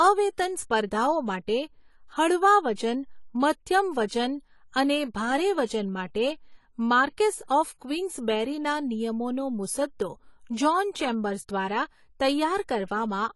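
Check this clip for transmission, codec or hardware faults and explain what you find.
The speech carries audible codec damage throughout, plus two brief pre-echo events.

AAC compression is the likely cause of the damage running through the whole clip. Nothing is present above 11.5 kHz. The encoder starves its quantiser, which fits a low bitrate near 32 kbps. The speech sounds dull and smeared, with a fizzy, warbling texture on sustained sounds and sibilants.

Pre-echo occurs twice. The first runs from 2.75 to 2.78 s, spreading about 26 ms. The second runs from 4.07 to 4.11 s, spreading about 37 ms. Each attack lands late in a transform block. Noise meant for the loud part fills the quiet gap before it. You hear a short hiss just ahead of each onset, and the attack itself sounds softened.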